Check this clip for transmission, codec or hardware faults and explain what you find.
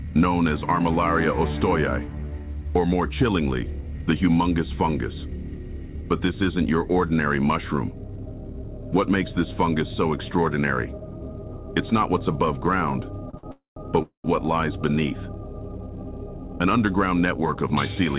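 There's a cluster of jitter-buffer trouble between 13.3 and 14.3 s, followed by a catch-up a couple of seconds later. The call path itself carries everything through a narrowband codec, so nothing comes through above 4 kHz, which fits G.711 A-law at 64 kbps.

Two short stalls from a late packet hit at 13.30 s (33 ms) and 13.37 s (running to 13.45 s, 60 ms). Each time a packet simply wasn't there on schedule, the buffer ran dry, and the receiver held the last bit of sound until the packet showed up. Nothing gets lost. You just hear a brief smear, a sound sustained a touch too long with a faint buzzy dip.

Right after that come two call audio freezes, from 13.51 to 13.78 s (250 ms) and from 14.02 to 14.26 s (217 ms). These were likely caused by packets being held up in transit long enough to empty the buffer completely. The receiver stretches the last sound into a fading buzz, then drops to silence for about 140 ms in the first and 110 ms in the second. 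When the audio resumes it picks up exactly where it stopped, so these are inserted gaps rather than missing material.

From 16.38 to 17.96 s there's a jitter buffer speed-up. All that stalling left the buffer holding more delay than it wants, so the receiver trimmed it back by snipping out tiny pitch-period-sized slices over and over, roughly a tenth of a second in total. Playback runs at about 107% speed with the pitch unchanged, so that stretch sounds slightly rushed.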